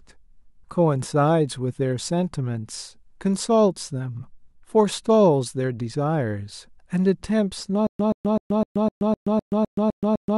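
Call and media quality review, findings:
Stutter with silent gaps, 7.87 s to end: a 128 ms burst repeats ten times with about 126 ms of digital silence between, on a 254 ms cycle. Likely a playback/stream stall; each retry replays the last fragment, then underruns. Underlying audio lost.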